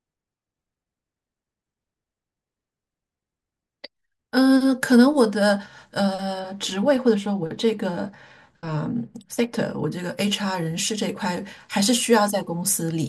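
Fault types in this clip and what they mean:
de-emphasis applied wrongly: an unneeded treble-cut filter rolled off the highs, about 10 dB down at 10 kHz, leaving the speech dull and muffled from 6.39 to 9.92 s.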